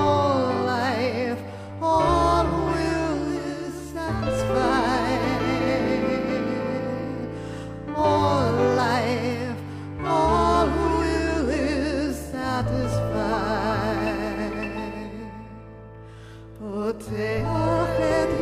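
No faults are audible anywhere in the audio.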